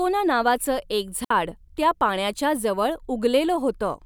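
A speech recording with a digital wireless dropout at 1.25 s, between "नावाच एक" and "त्या पाण्याच्या जवळ". For 60 ms the sound drops to near silence, with no click or noise burst at either edge. The receiver lost too much of the radio data stream and muted its output with a very fast fade. On a waveform this is a flat gap with slightly tapered edges. On a spectrogram it is a clean vertical blank band across all frequencies.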